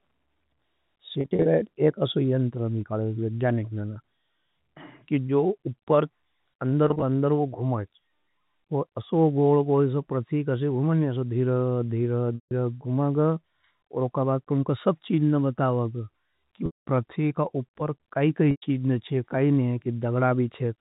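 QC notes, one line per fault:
1.21–1.45 s, 6.88–7.02 s, 12.35–12.51 s, 16.66–16.87 s, 18.51–18.62 s: packet loss with pitch repetition. The first two are scattered short gaps, 130 ms lost across 240 ms and 80 ms across 140 ms, none longer than 30 ms, heard as a brief held, buzzy stutter, the first just before "एक अशो यंटर मिकाले". The last three are solid dropouts of 160, 210 and 110 ms. In these, the repeated pitch period audibly fades toward silence before the speech cross-fades back. The loss pattern fits 10 ms packets. It sits over G.711 telephone band-limiting.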